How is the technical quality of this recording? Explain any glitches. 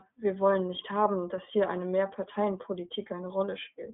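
The quality's limited: the whole clip runs through an iLBC codec. Nothing gets above about 3.8 kHz, so the speech sounds boxed-in and phone-like. Each 20 ms frame is coded on its own, which leaves a plainly rough, slightly synthetic edge, consistent with the 15.2 kbps mode.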